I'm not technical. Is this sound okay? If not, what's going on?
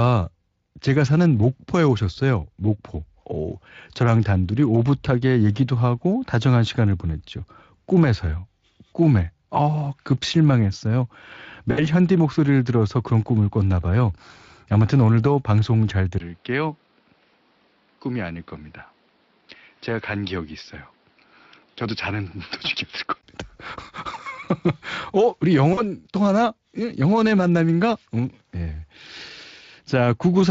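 No. Twice the speech briefly smears into a buzzy, fading sound, at 11.71 to 11.84 s and at 25.73 to 25.82 s. This is VoIP packet loss concealed by the speech codec: a few hundredths of a second of data never arrived, and the decoder guessed to fill the gap.

From 16.18 to 23.23 s the voice turns duller and quieter, with a short gap at the change and a faint new background hiss. The likely cause is an input switched to a poorer device, another microphone or a headset that drops the highest tones. Unlike the dropouts, this lasts for seconds rather than a blip.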